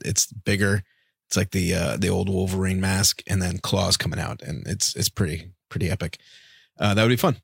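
No technical faults can be heard anywhere in the speech. Nothing interrupts or alters the audio at any point.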